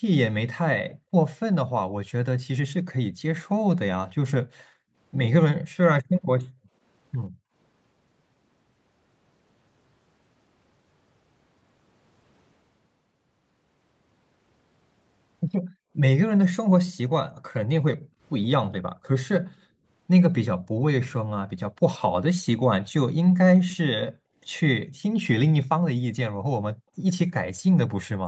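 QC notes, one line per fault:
0.89–1.11 s, 3.1–7.54 s, 15.59–15.73 s, 17.97–19.86 s, 24.12–25.02 s, 26.74 s to the end: background gated by the echo canceller. The room tone behind the speech drops out in short dips, then returns. Most dips fall about 40 dB; the one at 17.97–19.86 s falls about 29 dB. In the spans at 3.1–7.54 s, 17.97–19.86 s and 24.12–25.02 s, the dips add up to roughly 1 s, 0.7 s and 0.4 s. The canceller pulled the microphone down hard while the loudspeaker was active, so the ambience vanishes and snaps back.
23.70–23.77 s: echo leak. A faint copy of the speech follows it by about 132 ms, sitting about 20 dB below the direct sound. It lasts only a brief scrap. The likely cause is a far-end loudspeaker feeding its own microphone, with that side's echo canceller failing to remove all of it. The remainder travelled back through the Opus call path at 24 kbps, which also holds nothing above 8 kHz.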